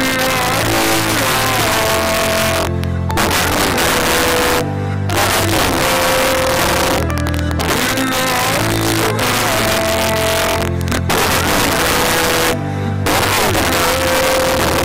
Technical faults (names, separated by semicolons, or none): integer overflow